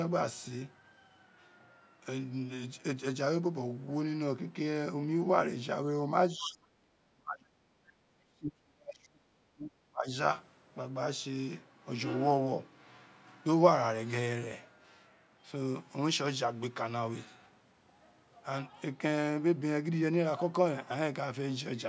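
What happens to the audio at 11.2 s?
Nothing goes wrong at 11.2 s; the speech there is intact, carried through the call's microphone processing, which trims the deepest bass and leaves nothing above 8 kHz.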